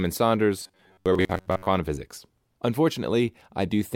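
From 0.63 to 1.67 s the speech turns into a rigid metallic buzz, robotic sound from repeated short buffers, likely from late audio being patched by looping roughly 11 ms slices. Unlike pitch shifting, it locks onto a fixed 94 Hz drone through most of that stretch.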